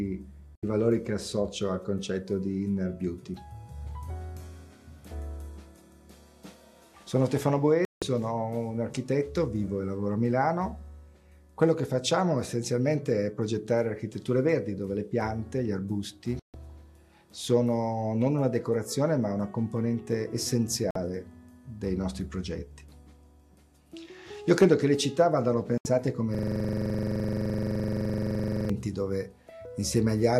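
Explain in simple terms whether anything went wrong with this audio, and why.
Two things went wrong. First, a digital broadcast dropout: the receiver lost good signal and went silent briefly at 0.55, 7.85, 16.39, 20.91 and 25.78 seconds, each gap under a fifth of a second.

Second, a system hang loop from 26.35 to 28.70 seconds. The computer froze, and one 43 ms scrap of sound repeated about 55 times, making a rapid buzzing stutter.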